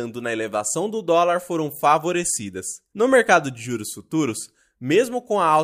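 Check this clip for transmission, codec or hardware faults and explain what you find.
No faults detected in this speech.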